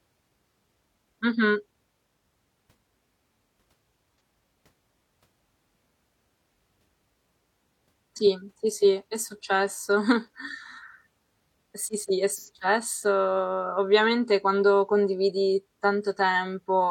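Brief smeared, phasey patches interrupt the speech at 4.16 to 4.20 s and 12.36 to 12.49 s. This is AAC frame loss with concealment, with the decoder refilling the gaps from the last good spectrum. The two gaps fit about one and two lost frames.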